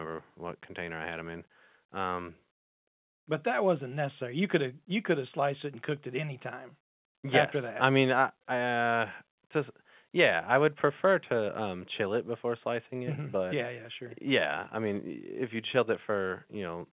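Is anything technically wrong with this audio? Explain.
No, nothing's wrong here; it's just speech carried over ordinary mu-law telephone coding, so the narrow phone-line sound with nothing above 4 kHz is exactly what that format gives you.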